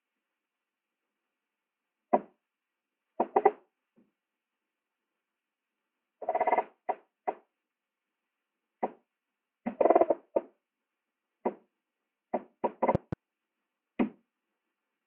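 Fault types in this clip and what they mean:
Loud pop: at 12.95 to 13.15 s, two sharp pops land in quick succession, standing well above the surrounding level while the sound carries on beneath them. The likely cause is a sudden voltage step or spike, such as a plug or switch transient.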